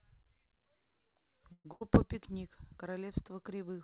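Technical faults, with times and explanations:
1.52 to 1.67 s, call audio freeze: The packets were likely held up in transit, so the jitter buffer ran dry and the receiver had to fill about 126 ms on its own. It stretches the last sound into a buzz or hiss that fades out, and about 60 ms of that is outright silence. When delivery resumes, the audio picks up exactly where it stopped. Nothing is lost, but everything after this point arrives about 126 ms later.
1.73 to 1.83 s, burst of packet loss: A run of packets was lost or came too late to play, and the receiver concealed the gap for about 82 ms. It continues the last sound and turns it down as the gap goes on, which produces a brief fading buzz or hiss. When real audio returns, it jumps ahead, and about 80 ms of the original is gone. Over this call path, which has nothing above 4 kHz, the concealment sounds dull and muffled.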